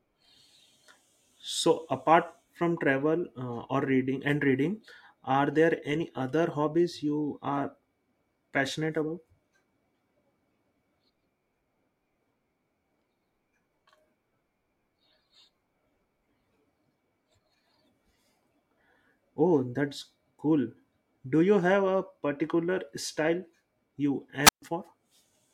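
At 24.44 s, right after "a particular style you", the speech hits a wireless microphone squelch dropout: the FM signal fades, hiss swells, then the receiver mutes for about 135 ms until 24.62 s. The waveform shows a flat gap, and the spectrogram a brief broadband noise smear before a blank column.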